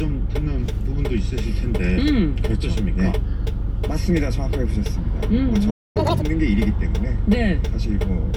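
A recording of everyday sounds drops abruptly to silence at 5.70 s and stays dead until 5.97 s, a gap of about a quarter of a second, before the sound resumes where it stopped. This playback stall was likely caused by the player's buffer running dry or its output thread being held up, so nothing reached the output until the data flow recovered. Straight after it, from 5.97 to 6.22 s, the sound rushes by at double speed and jumps up in pitch by close to an octave, then settles back to normal. This is catch-up at higher speed: the player resampled the backlog that built up during the stall so it could win back the lost time, and playing it twice as fast pushed the pitch up as well.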